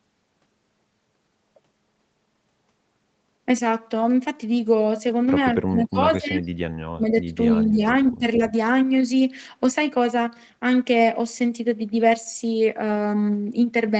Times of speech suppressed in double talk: 5.54-6.49, 6.93-7.84, 8.12-8.52

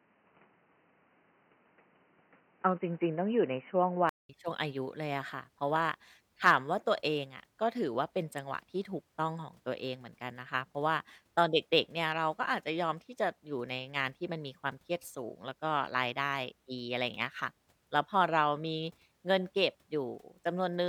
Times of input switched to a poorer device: 0.00-4.29

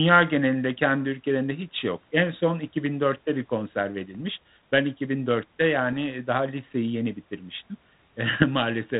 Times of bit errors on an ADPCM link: 4.15-4.21, 5.92-5.97, 8.42-8.44

